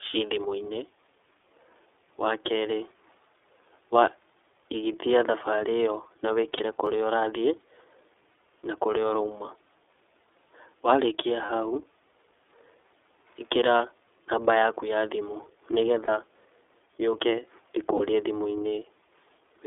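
iLBC codec, throughout the 20 seconds: the whole clip has been through this narrowband VoIP codec, and the damage is plainly audible. The band runs only from about 300 Hz to 3.5 kHz, so the speech sounds thin and boxed-in, with a rough, slightly synthetic grain. Each 30 ms frame's excitation is coded on its own, which fits iLBC's 13.33 kbps mode.

Lost iLBC frames, first at 6.57 s: one 30 ms frame goes missing, and the decoder fills the hole by repeating its last pitch cycle blended with noise. The result is a brief held, faintly buzzy vowel-like smear rather than a gap. Because iLBC frames do not depend on earlier ones, the speech snaps back to normal immediately afterwards.

Block of digital silence at 6.86 s: 2.9 ms of samples drop to silence and return with no fade. Both edges are hard discontinuities, so it comes across as a small tick. A block of 128 samples fits a 128-sample output buffer that was not filled in time.

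Lost iLBC frames again at 11.45 s, 16.05 s and 17.97 s: each is a single 30 ms loss concealed the same way, a short buzzy sustain of the preceding sound followed by an immediate clean recovery.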